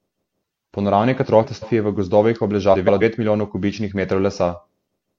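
Frames out of order occur from 1.25 to 1.64 s, just before "je v gozdovih", and from 2.73 to 3.03 s, ending before "milijonov kubičnih". Two adjacent blocks of about 186 ms, then about 139 ms, swap places. Each stretch flutters. No time is lost.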